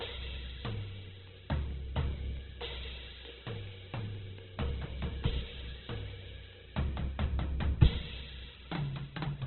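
Throughout the music, tones sound rough, grainy and noisy rather than clean, and the whole mix is dull and boxed-in, with nothing above about 4.1 kHz. This is likely heavy Opus compression in its music (CELT) mode at a very low bitrate, around 8 kbps. Starved of bits, the encoder keeps each band's energy but refills the detail by folding lower bands or inserting noise, and it narrows the bandwidth to narrowband, removing the top end entirely.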